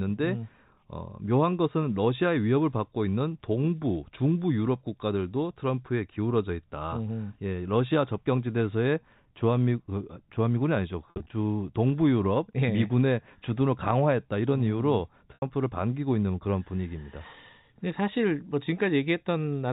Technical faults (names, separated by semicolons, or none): packet loss with pitch repetition